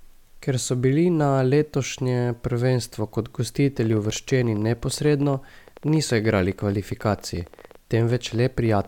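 A train of clicks runs from 3.84 s, right after "na letošnje prvenstvo kot", to the end of this speech clip at 8.88 s: similar pops at about 14 per second, irregularly spaced, peaking near speech level, likely from interference or a faulty connection or power supply.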